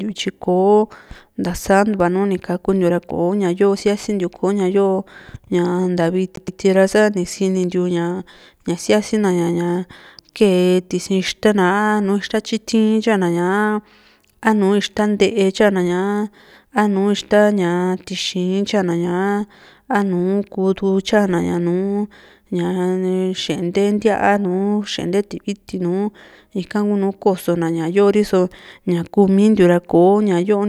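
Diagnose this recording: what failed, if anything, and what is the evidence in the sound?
The failure is at the playback stage, a CD stuck on one turn. From 6.36 to 6.60 s, just before "ra sani sinintiu", a 0.12 s slice of the speech plays twice in a row, giving the quick, even stutter of a skipping disc. A scratch sends the laser back one track each rotation, so the same stretch repeats with a brief mute at each jump. A waveform would show identical blocks at equal spacing, and a spectrogram would show a repeated pattern separated by thin gaps.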